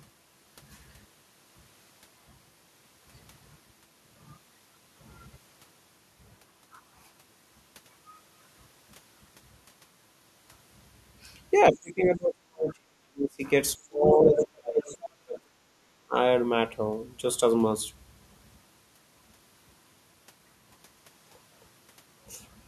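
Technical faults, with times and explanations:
11.71–13.43 s, 13.75–14.85 s, 15.24–16.15 s: speech suppressed in double talk. The talker drops away, by roughly 40 dB at worst, likely because the echo canceller couldn't tell them from the far end and ducked both.
14.24–14.38 s, 14.84–15.1 s: other side's voice leaking through. Short scraps of a second voice slip in, the first about as loud as the talker, the second much quieter, likely leftover loudspeaker echo the canceller missed.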